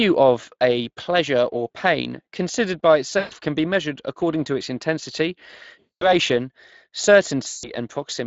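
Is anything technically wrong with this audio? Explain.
Yes, two things. The whole clip is coded with the Speex codec, and the damage is plainly audible. Speex is a CELP codec that models the vocal tract with a filter and spends its limited bits on the excitation feeding it. Here that excitation is clearly short of detail, so the speech sounds grainy and hoarse throughout. That fits a mid-range quality setting rather than the near-vocoder bottom end.

On top of that there are three spots of VoIP packet loss concealed by the speech codec. The first runs from 3.19 to 3.34 s, between "or pain considered by" and "can be measured according". The second runs from 5.79 to 6.13 s, right after "according to its intensity". The third runs from 7.47 to 7.71 s. Each time, packets went missing and the decoder kept extrapolating its last pitch and filter while pulling the gain down. You hear the sound smear into a buzzy tone or coloured noise that fades. 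The gaps point to roughly 120, 220 and 160 ms of lost audio. Because each frame builds on the previous one, the speech stays weak or distorted for tens of milliseconds or more after normal packets return.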